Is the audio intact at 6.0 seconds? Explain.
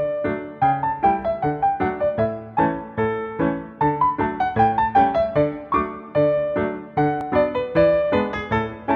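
Yes, the audio is intact at 6.0 seconds, with no dropout, click, distortion or other fault audible at that point.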